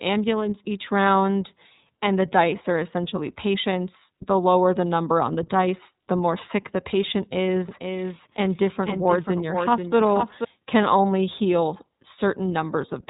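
The speech has passed through the iLBC codec for its whole length. Each 30 ms block of excitation is coded on its own without help from the block before, which fits iLBC's 13.33 kbps mode, and the narrowband design removes everything above about 3.8 kHz. The result is plainly audible: the voice stays intelligible but sounds muffled and telephone-like, with a grainy, slightly synthetic roughness on every syllable.

From 7.69 s to 10.44 s, starting just after "more sick the patient" and ending before "can only heal", a doubled audio track appears, likely from the signal being captured a second time along a slower path. A second full-band copy trails the original by about half a second, a few decibels quieter. It carries no reverberant tail or room colouring, so it sounds like a distinct, dry repeat of the speech. It cuts in and out abruptly at both ends.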